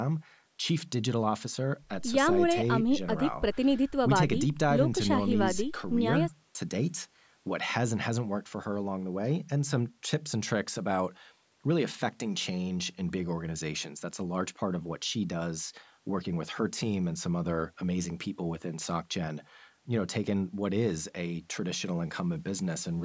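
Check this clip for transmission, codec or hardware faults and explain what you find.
No transmission, codec or hardware faults are audible in the speech, which has passed through a call's microphone processing that trims the lowest bass and leaves nothing above 8 kHz, as expected for that path.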